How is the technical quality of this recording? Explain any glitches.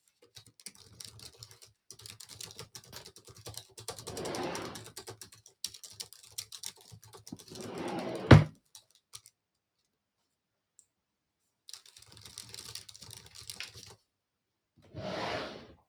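The quality is compromised by a speech noise suppressor acting on non-speech sounds.

A noise suppressor applied to music or sounds runs throughout, treating steady and fading sound as noise and swinging the level by roughly 15 dB, so the sound pumps and thins.

Sound cut by the noise suppressor dips by about 14 dB at 0.0–0.31 s and 0.48–0.73 s, about 15 dB at 1.54–1.89 s and 5.3–5.63 s, about 8 dB at 6.73–7.21 s, about 16 dB across 8.54–11.68 s, and about 15 dB at 13.97–14.8 s. Sustained sounds and decays sink while sudden attacks pass.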